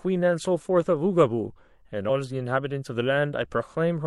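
Speech clip with compressed frames skipped at 2.05 to 2.10 s. The audio jumps forward by roughly a tenth of a second, which fits about two whole frames of around 46 ms each being lost or rejected by the decoder.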